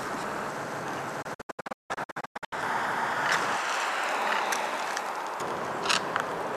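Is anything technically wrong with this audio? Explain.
Yes. From 1.22 to 2.53 s there is a digital broadcast dropout: the receiver lost good frames and muted until they returned. About 0.8 s of sound vanishes in several short holes, the longest 168 ms, each cut with a quick 8 ms fade.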